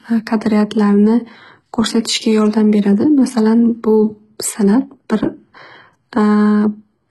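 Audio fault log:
Throughout, HE-AAC compression: the speech has heavy codec damage, with a synthetic top end and nothing at all above about 11.8 kHz. The s sounds come out gritty and a bit lispy, and the treble doesn't sit right against the lower band. That's likely HE-AAC at a very low rate, around 16 kbps judging by the damage: only the lower spectrum gets coded, and the highs are copied up from below, so their harmonics don't line up.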